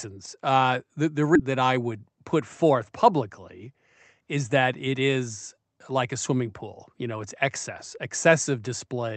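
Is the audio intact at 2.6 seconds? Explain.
No. From 1.45 to 3.74 s a jitter buffer speed-up trims pitch-period slices, roughly a fifth of a second in total, so speech runs 108% fast at unchanged pitch, with steady harmonics but shortened syllables on a spectrogram.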